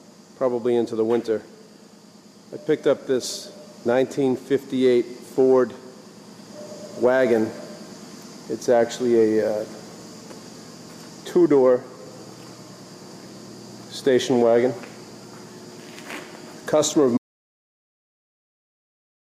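At 17.17 s the sound cuts off abruptly into an audio dropout to silence that runs right to the end, about 2.06 s of silence with no room tone at all. That points to the input likely being lost while recording simply kept writing silence.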